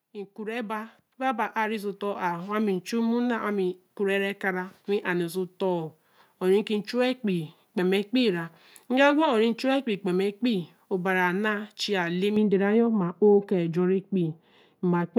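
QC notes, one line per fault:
0.12–2.58 s, automatic gain rising. The level climbs by about 10 dB over roughly two and a half seconds. The gain control judged the input too quiet and raised it step by step, so the speech and the background noise swell together.
12.36–15.18 s, de-emphasis applied wrongly. A treble cut meant to reverse pre-emphasis lands on audio that never had it, or is applied a second time. The response slopes smoothly downward, about 11 dB lower at 10 kHz than at 1 kHz, so the speech turns dull and muffled.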